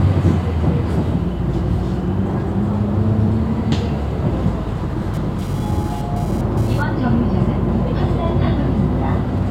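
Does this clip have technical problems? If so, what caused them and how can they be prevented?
Yes. From 5.14 to 6.82 s a hard, raspy buzz sits about 25 dB below the sound, pitched at roughly 217 Hz and dense with harmonics, with no relation to the audio. This is GSM phone buzz. The buzz points to a nearby 2G phone sending data: each radio burst is rectified in the audio circuitry, so the buzz appears and then stops. Keep phones away from the recording chain, or switch them to flight mode.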